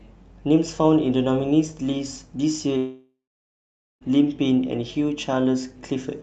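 From 2.77 s to about 4.03 s there's a long network dropout, likely a run of lost packets. The receiver stretches the last sound into a fading buzz, then goes quiet for about 0.83 s, and the speech picks up again with about 1.2 s simply gone.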